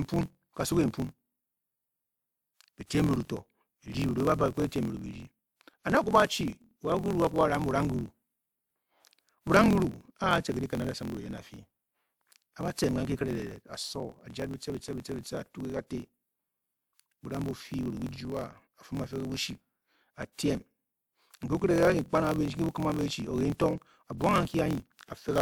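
From start to finish the speech carries a block size mismatch (truncated). One stage writes longer blocks than the next reads, so each block's tail is discarded. The result is a 43.1 Hz buzz, consistent with 1024-sample reads, and delivery running 1.12 times fast.

At 2.86 s, pre-echo appears, lasting until 2.9 s. A transform codec spread quantisation noise across its block, so hiss sized for the loud attack leaks about 40 ms ahead of it into the quieter moment, leaving the onset smeared and softened.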